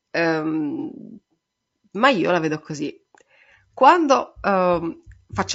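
Across the whole speech clip the voice is rough and grainy, with plainly audible coding damage. Noise fills the gaps between the pitch harmonics, and the top band sounds thin and synthetic. The likely cause is low-delay AAC compression of the AAC-ELD kind used in video calls. Its short frames resolve harmonics poorly and spend more bits doing it. The roughness fits a low bitrate of around 32 kbps.

From 0.80 to 0.84 s there is a brief smeared, noisy patch with a phasey edge. This is AAC frame loss with concealment. About 30 ms of coded audio went missing, which fits a single lost frame. The decoder filled the gap from the last good spectrum. It carried the energy forward with scrambled phase instead of the real signal. The gap is short, so the sound does not fade to silence. It blurs for an instant and then recovers.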